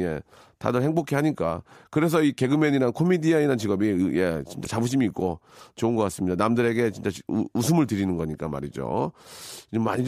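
Broken MP3 bit reservoir at 4.64 to 4.66 s: the speech jumps ahead with a glitch lasting about one 26 ms frame, likely from frames borrowing reservoir bytes that were missing.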